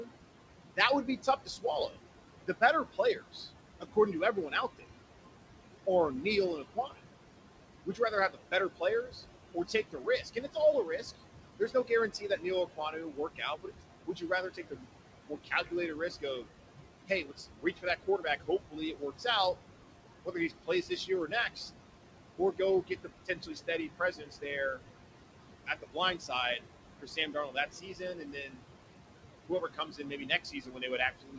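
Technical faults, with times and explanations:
Throughout, noise suppressor artifacts: The suppressor pulls down every band it judges to be steady noise, frame by frame, by up to about 18 dB. The room noise, only about 10 dB under the speech, drops away in the gaps and climbs back whenever speech starts. On top of this comes the G.722 band limit at 8 kHz.
0.02–4.83 s, 5.86–19.25 s and 20.25–31.39 s, speech cut by the noise suppressor: In these stretches the suppressor mistakes parts of the speech for noise and turns them down by as much as about 18 dB. In total about one second is affected in the first range and about three seconds in the second. Soft consonants, word endings and quieter phrases are lowered along with the background. They sound swallowed or faint, as if the talker briefly dropped away.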